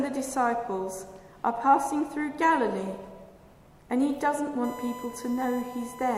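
USB bus current in 1 ms frames leaks through power or ground from 4.64 s onward, adding a fixed 1 kHz USB whine about 15 dB below the sound.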